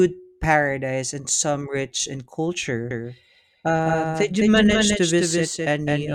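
From 2.91 s to the end, a doubled audio track appears: a second copy of the speech lagging about 200 ms and roughly 5 dB quieter starts abruptly, likely from a slower capture path. The waveform shows each syllable repeated, undecayed.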